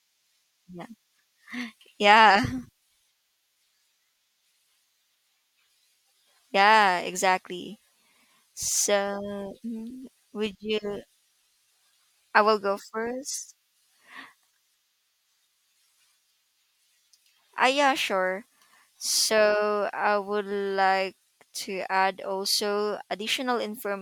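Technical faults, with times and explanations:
0.24 to 23.92 s, clock slip clicks: faint ticks roughly every half second, likely from unsynchronised clocks slipping one sample; thin vertical lines on a spectrogram.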